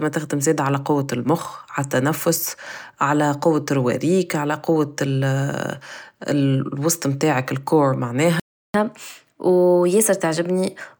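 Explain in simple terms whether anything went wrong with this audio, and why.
At 8.40 s the speech just cuts out for about a third of a second, until 8.74 s. That's a playback stall: the player most likely ran dry of data or got held up, so it went silent until it could pick up again.

Right after, from 8.74 s to 10.97 s, you get catch-up at higher speed. The player races through its backlog at 1.1 times normal speed to make up the lost time, so the speech sounds a bit rushed and pitched up by around a semitone and a half.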